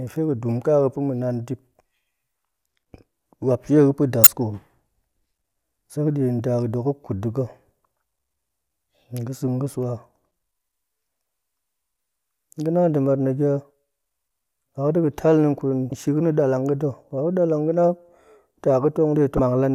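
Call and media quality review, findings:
Damaged data in a compressed stream, 4.24–4.27 s, 15.89–15.92 s and 19.36–19.39 s: short blips, roughly 30 ms each, breaking into the speech. Probable component: decoder input. Corrupt or lost bytes in the compressed stream; decoder misreads the affected frames, loses frame sync and resyncs at the next valid header. Three separate short bursts point to isolated damage rather than a continuous fault.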